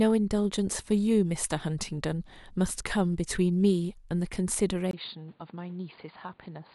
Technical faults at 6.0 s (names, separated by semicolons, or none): input switched to a poorer device